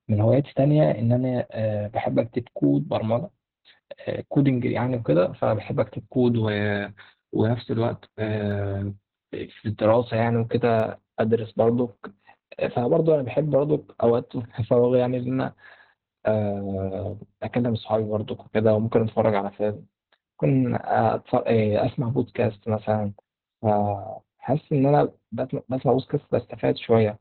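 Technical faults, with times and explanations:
Throughout, Opus voice compression: the speech is heavily squeezed, with nothing above about 4 kHz. That's the narrowband cut-off the coder falls back to when it's starved of bits, which fits SILK mode at around 8 kbps. The excitation is coded coarsely, so the voice comes out muffled, a bit hoarse and faintly robotic. The coder works in 20 ms frames.
8.51, 10.80 and 17.12 s, dropped samples: each is a single sharp click, a thin vertical line through the spectrum. What's gone is a tiny sliver of audio, well under a millisecond, so no sound is actually lost. The waveform just jumps from one value to a later one, and that instant step is the click. The likely cause is a handful of samples slipping out of the stream.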